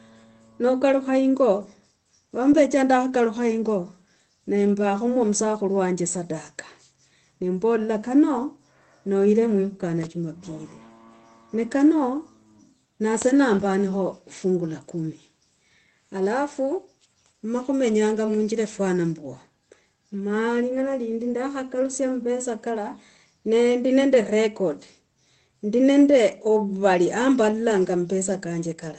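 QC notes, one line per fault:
No faults are present; the speech comes through a call path whose codec, which sounds consistent with Opus at a modest bitrate, limits the audio bandwidth to 8 kHz.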